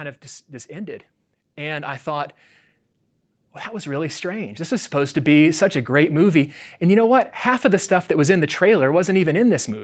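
From 0.66 to 2.4 s, just after "of just just", automatic gain rising sets in: the gain control judges the level too low and lifts it by about 5 dB, so voice and room noise swell together. A second rise, about 9 dB, runs from 3.39 to 5.72 s, ending before "a great movie". On the waveform the envelope and noise floor climb steadily; the spectrogram brightens uniformly below its 8 kHz ceiling.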